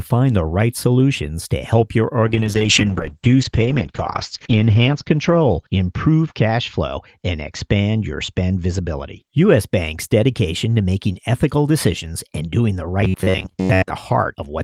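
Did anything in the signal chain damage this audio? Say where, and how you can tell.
Yes, at two points in the chain.

Codec and network stage: a call bitrate drop runs from 2.28 s to 9.27 s, starting right after "solutions to help your". The encoder fell from 32 kbps to 8 kbps and stayed at the floor for about 2.35 s. With so few bits, Opus codes coarsely and narrows the band, so the sound turns rough and muffled. On a spectrogram, content that reached 20 kHz stops at a flat ceiling near 8 kHz for that span.

Buffer stage: from 13.01 s to 13.90 s, just after "decisions and doing the", the sound becomes robotic from repeated short buffers. It is a rigid metallic buzz at 93.8 Hz that still loosely follows the speech. The likely cause is audio arriving too late, so playback loops the last buffer of roughly 10.7 ms for most of that stretch while fresh audio is dropped. The waveform shows identical short cycles tiling most of the span, and a spectrogram shows evenly spaced harmonics locked to 93.8 Hz.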